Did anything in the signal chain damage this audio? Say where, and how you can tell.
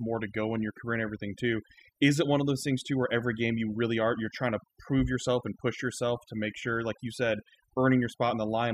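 Yes. A noise-reduction stage was set far too aggressively, and its overdone noise removal runs through the whole speech clip. The suppressor shuts down individual frequency bands whenever their level sits near its noise estimate, and softer parts of the voice fall below that threshold too. What remains between phrases is near silence flecked with twinkling, chirpy specks.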